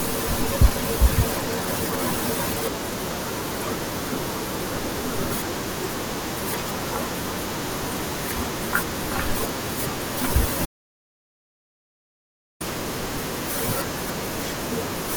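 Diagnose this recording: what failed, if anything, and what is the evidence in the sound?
Audio dropout to silence at 10.66 s: the speech cuts off mid-flow and stays silent until 12.60 s, about 1.95 s with no room tone at all. That points to the input side, likely a lost device link or a stray mute, with the recorder just writing silence.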